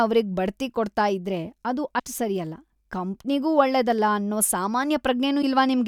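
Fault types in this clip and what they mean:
Broken MP3 bit reservoir: The speech jumps ahead abruptly at 1.98 to 2.00 s and 5.41 to 5.44 s, each glitch lasting about one 24 ms frame. The likely cause is dropped MP3 frames, so the following frame decodes its borrowed data from the wrong bytes.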